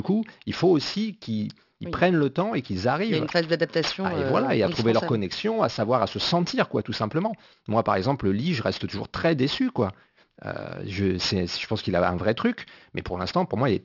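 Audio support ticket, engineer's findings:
Gritty, metallic sibilants throughout, spectrum packed hard to 6 kHz. Aliasing: downsampled without anti-alias filter, fitting a 12 kHz rate; content above 6 kHz folds back.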